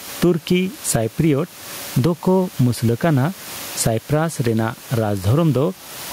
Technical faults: gain pumping

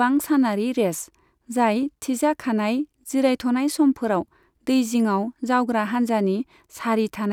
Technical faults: none

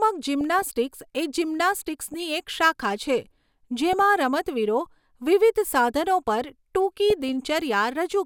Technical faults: DAB burbling

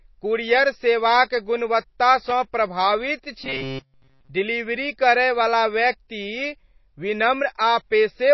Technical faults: MP3 compression; loose connector crackle; robotic sound from repeated short buffers

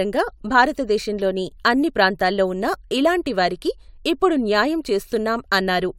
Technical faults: none

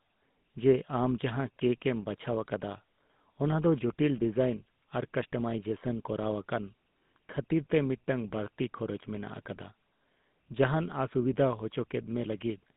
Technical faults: GSM full-rate codec

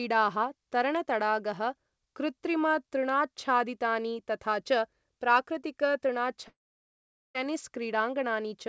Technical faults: long network dropout

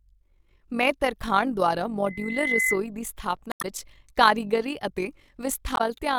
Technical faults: overlap-add ripple; loudspeaker feedback squeal; damaged data in a compressed stream

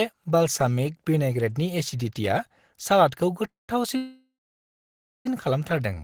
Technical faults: call audio freeze

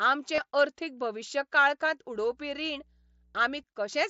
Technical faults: concealed Bluetooth headset packet loss; mains hum

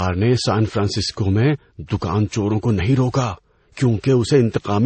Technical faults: transcoding between lossy codecs

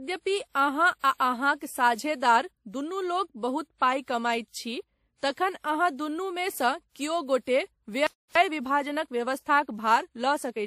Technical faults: transcoding between lossy codecs; playback stall; time-compressed catch-up

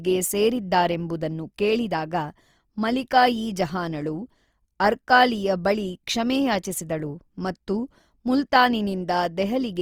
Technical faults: Opus compression

